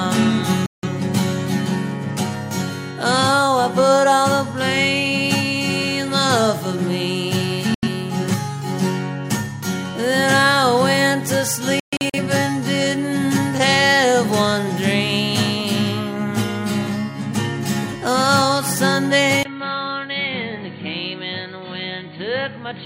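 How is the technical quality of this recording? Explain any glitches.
The recording has two kinds of fault: three digital broadcast dropouts in the first 12.2 s and a change of input near the end.

The digital broadcast dropouts occur at 0.66 to 0.88 s, 7.74 to 7.88 s and 11.80 to 12.18 s. Each time, the receiver lost valid frames and muted until clean data resumed, so the programme simply vanishes and then picks up later, with the missing material gone. About 170 ms is lost in the first and 85 ms in the second. The third is broken into several short holes spread over roughly a third of a second. They total about 213 ms, and the longest single gap is 128 ms.

At 19.43 s the input was most likely switched to a poorer device, which stays in use to the end. A brief 20 ms silence marks the changeover. After it, the new path passes nothing above 4.5 kHz, so the sound turns dull and boxy. The level drops by about 10 dB, and a fresh background noise appears, sitting only around 35 dB under the signal.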